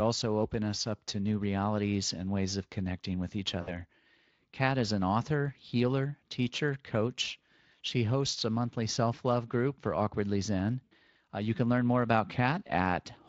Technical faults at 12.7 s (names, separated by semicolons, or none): VoIP packet loss concealed by the speech codec